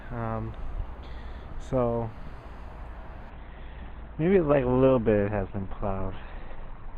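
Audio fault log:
3.3 s to end: adaptive stream at a lower bitrate. The stream switched down mid-play, so codec artefacts abruptly rise with no gap, fitting Opus falling from 64 to 12 kbit/s.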